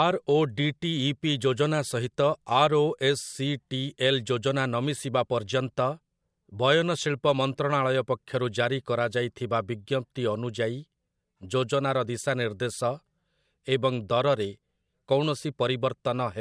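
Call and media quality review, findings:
No audible defects found across the speech recording; nothing to action.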